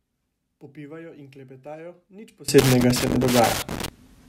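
One channel inverted, from 0.0 to 2.48 s: the speech drops by about 24 dB to a faint copy. This is likely one stereo channel with reversed polarity, so the centred content common to both sides cancels when summed to mono, leaving only their difference.

Loose connector crackle, from 2.59 to 3.88 s: an irregular burst of scratching and crackle runs over the speech. A worn or dirty contact is making and breaking rapidly, chopping the signal on and off.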